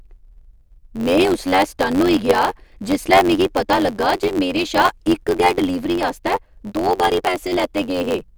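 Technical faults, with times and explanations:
Throughout, block size mismatch (truncated): each 512-sample block loses its tail, giving a buzz near 92 Hz and speech running about 1.07 times fast.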